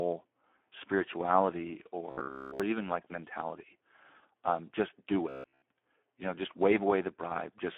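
A speech clip heard throughout through the Speex codec at 8 kbps. The line is narrow, roughly 250 Hz to 3.4 kHz, and nothing sounds above 3.4 kHz. At this low rate the codec has very few bits for the excitation signal, so the damage is heavy. The voice comes out noisy and hoarse, with a thin, boxed-in tone. Consonants lose their edge because the upper band is simply gone.

There are also two bursts of robotic sound from repeated short buffers. The first runs from 2.10 to 2.60 s, ending just before "even like mentality". The second runs from 5.29 to 5.62 s, right after "just do". In both, the sound turns into a rigid, metallic buzz at about 66.8 Hz. Essentially all of each stretch is repetition. The likely cause is audio arriving too late, so the software loops the last fragment, about 15 ms long. That fixed loop length sets the buzz pitch, while the real audio in those gaps is lost.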